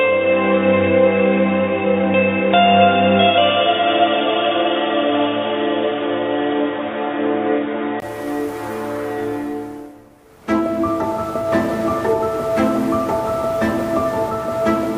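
Until 8.02 s the input was likely switched to a poorer device, cutting everything above 3.8 kHz; dull, boxy sound clears after a 20 ms gap.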